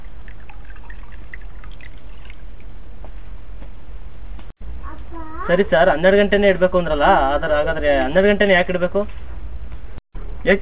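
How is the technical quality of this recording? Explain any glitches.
No glitches or faults audible.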